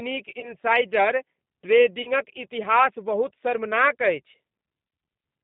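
The whole recording carries the sound of the G.729 codec. The speech band runs only from about 150 Hz to 3.7 kHz, and the roughness and slightly synthetic texture point to an 8 kbit/s G.729A-type coder. It rebuilds each short frame from a vocal-tract filter, a pitch predictor and a handful of pulses rather than the original waveform, so the coding damage is plainly audible throughout.

At 0.40 s the codec is covering for VoIP packet loss. The gap fits one lost packet carrying about 30 ms of audio. The decoder carries its last pitch and filter forward at falling gain, which gives a brief stretched, fading sound. Because each frame builds on the one before, the disturbance lasts until about 0.54 s. The same concealment recurs from 2.02 s to about 2.11 s, again consistent with a single 30 ms packet.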